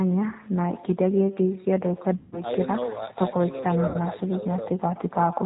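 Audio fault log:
throughout, echo with no canceller: The far end plays the call over a loudspeaker and its microphone feeds it back with nothing to cancel it, so the speech returns about 21 dB down, roughly 150 ms late, as a thinner shadow trailing every phrase.
throughout, G.729 codec: The speech passes through a G.729 coder at 8 kbit/s, which models each frame as a vocal tract filter plus pitch and a few pulses and discards everything above 4 kHz, leaving the sound band-limited, plainly rough and faintly synthetic.
2.17–2.40 s and 3.88–3.97 s, VoIP packet loss concealed by the speech codec: Audio went missing, about 150 ms in the first gap, which fits five lost packets, and 60 ms in the second, which fits two. The decoder filled each gap by extending its last pitch and filter at falling gain, so the sound smears into a fading buzz or coloured noise. It stays weak for a moment after audio resumes because each frame is rebuilt from the one before.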